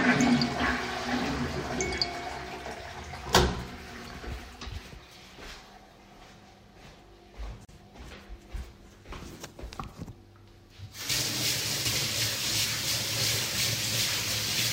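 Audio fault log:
7.65–7.69 s, gap at a join of encoded pieces: a 39 ms gap cuts into continuous sound, left by untrimmed encoder delay and end padding where separately encoded segments meet.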